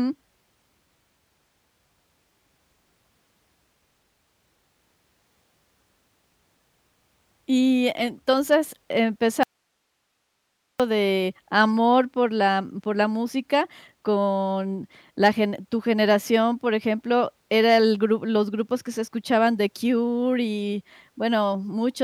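At 9.43 s the speech cuts abruptly to hiss about 50 dB down, returning at 10.80 s with "de amor por la". Hard edges mark this audio dropout to a faint residue, likely a lost source on a live path, not a pause or fade.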